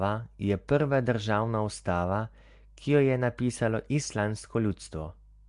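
Nellymoser compression runs through the whole of this speech clip, giving it a rough, hissy halo and a smeared, underwater quality. The likely cause is Nellymoser Asao, Flash's old microphone codec, which codes short blocks at a fixed two bits per sample; weak bands get no bits and are filled with noise, which is the hiss heard here. Nothing survives above 10.6 kHz, which fits a rate of around 44 kbps.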